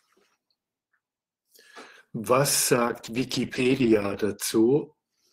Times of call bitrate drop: 2.78-4.33

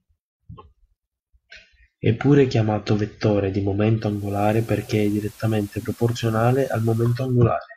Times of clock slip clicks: none

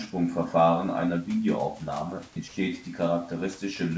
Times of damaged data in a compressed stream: none

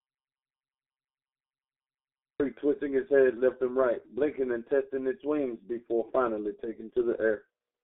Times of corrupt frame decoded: none

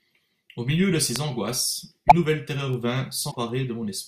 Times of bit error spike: 1.16, 2.73

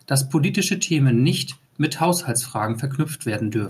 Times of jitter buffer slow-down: none

